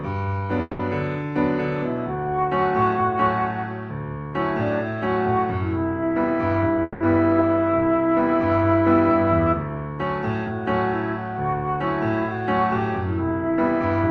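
At 0.61 s and again at 6.82 s, the sound stalls for about 0.2 s each time. These are call audio freezes. The last sound is stretched into a fading buzz or hiss, likely because packets were held up and the jitter buffer ran empty. Then the audio resumes where it stopped, 180 ms late, with nothing lost.

From 13.30 to 14.09 s comes a jitter buffer speed-up. The receiver trims tiny pitch-period slices, around 50 ms in total, to shed the built-up delay. The sound runs about 5% fast at unchanged pitch and feels slightly hurried. Throughout, the call codec's top end stops near 12 kHz.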